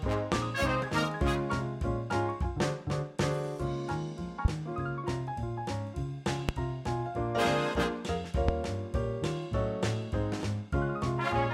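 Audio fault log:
0.32–0.35, 4.45–4.48, 6.49–6.52 and 8.49–8.52 s: loud pop. Each is one sharp pop, about 20 dB above the sound, which continues underneath. Likely a brief voltage pulse.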